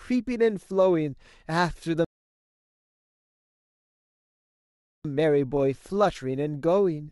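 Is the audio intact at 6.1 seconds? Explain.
Yes, the speech at 6.1 seconds comes through intact, with no dropout, click, distortion or other fault at that point.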